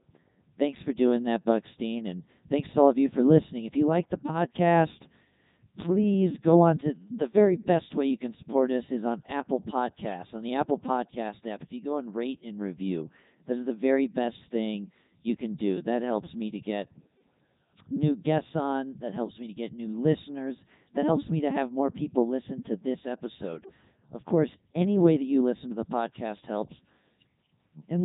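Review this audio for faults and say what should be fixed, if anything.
The whole clip has passed through a Codec 2 vocoder. The speech sounds robotic and buzzy from start to finish. The damage is heavy, even at the 3.2 kbit/s mode. The decoder rebuilds each sound from sine waves using only pitch, voicing, energy and a rough spectral envelope. The original waveform is discarded. Nothing is left above 3.8 kHz, so the sound is dull and narrow. To prevent this, record or send the audio through a full-band waveform codec at a higher bitrate instead of a low-rate vocoder.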